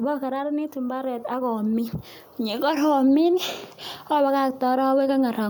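From 0.05 to 0.8 s, automatic gain falling: the gain control judged the input too loud and pulled its level down by about 4 dB, so the speech and its background sink together. On a waveform the envelope tapers steadily; a spectrogram darkens evenly across all frequencies.

Overlapping from 0.73 to 1.77 s comes automatic gain rising, as the control finds the input too quiet and lifts the gain back by about 4 dB over roughly a second. Voice and noise floor swell in unison, seen as a widening waveform envelope and uniformly brightening spectrogram.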